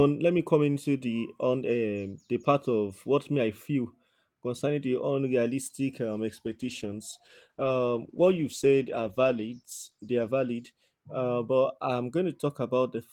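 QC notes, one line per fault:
6.46–12.35 s, call bitrate drop: speech turns coarse, watery and muffled, worst for about 3.6 s, then clears. The encoder was given far fewer bits, consistent with a fall from around 40 kbps to roughly 13 kbps, so detail and upper frequencies are lost.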